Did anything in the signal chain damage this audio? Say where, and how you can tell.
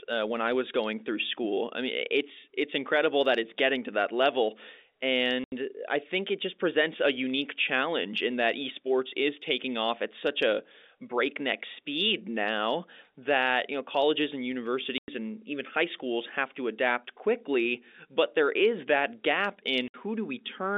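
Yes, packet loss filled with silence on the network path: hard-edged silent gaps at 5.44–5.52, 14.98–15.08 and 19.88–19.94 s, lengths fitting 20 ms packets; concealment would smear rather than click.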